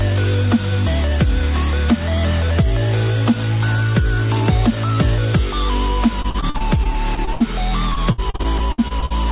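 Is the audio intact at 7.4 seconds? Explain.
No. At 7.4 s the sound is choppy and robotic, at the tail of repeated packet loss from 6.22 to 7.42 s: short holes up to 72 ms are patched by continuing the preceding sound.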